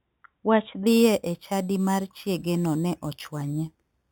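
From 0.87 s to the end, the speech carries imaging from sample-and-hold upsampling. Each sample was simply repeated to reach a higher rate, which fits a source rate of 8 kHz. Unfiltered mirror images fill the band from 4 to 8 kHz at about 18 dB below the signal. The result is a bright metallic fizz that tracks the speech level, and its lowest copy moves opposite to the pitch.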